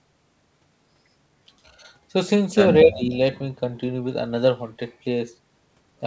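From 2.84 to 3.13 s the speech level drops sharply, by roughly 15 dB at its deepest, before recovering. This is likely speech suppressed in double talk: the echo canceller could not separate the talker from far-end echo and attenuated both. The clip's band limit near 8 kHz fits a wideband call codec.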